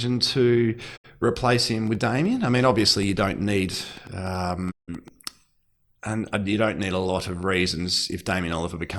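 A digital broadcast dropout at 0.96 to 1.06 s mutes the speech just before "replace him". The receiver stopped receiving good frames and fell silent over a 20 ms fade. The roughly 64 ms gap fits two lost frames.

A train of clicks runs from 1.87 to 5.09 s, after "to replace him". Around fifteen similar pops arrive irregularly at about 5 per second, roughly as loud as the speech, likely from interference or a faulty connection.

A second dropout at 4.70 to 4.90 s fades out the audio for about 160 ms, which suggests five frames lost.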